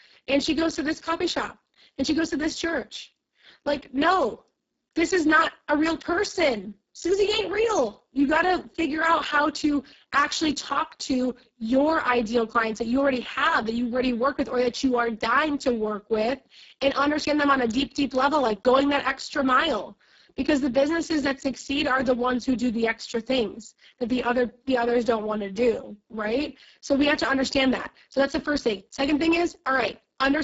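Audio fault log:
throughout: Speex codec. Speech sounds hoarse and noisy with nothing above 7.7 kHz, which fits a bitrate near 6 kbps starving the CELP excitation.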